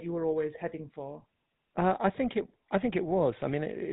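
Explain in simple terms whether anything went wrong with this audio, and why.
The speech sounds buzzy and gravelly from start to finish, with nothing above 4 kHz. This is the GSM full-rate codec, which rebuilds the voice coarsely from a simple model.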